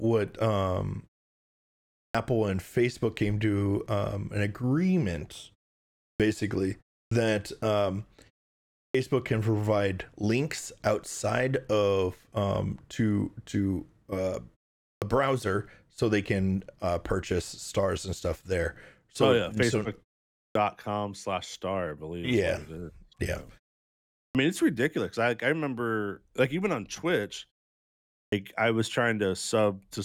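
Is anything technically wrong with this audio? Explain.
Yes. There is a clipped start after a pause, eight times: at 2.1, 6.15, 7.06, 8.89, 14.97, 20.5, 24.3 and 28.27 s. The output device goes idle during the silence and needs time to wake. About 46 to 55 ms of the returning speech is lost each time. Words jump in abruptly, missing their first sounds, as before "can provide links outside", "slash star I believe" and "mean it's ridiculous I". The preceding pauses last 0.3 to 1.1 s.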